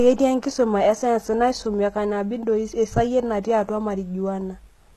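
Throughout the recording, the speech has most likely passed through HE-AAC compression, which fits a bitrate around 16 kbps. At that rate the encoder keeps only the lower spectrum and fills the treble by copying lower bands upward under a coarse envelope, so the top end is synthetic. Nothing reaches above 12.3 kHz, and the damage is plainly audible: s sounds come out gritty and lispy, with a metallic sheen where the rebuilt harmonics fail to line up.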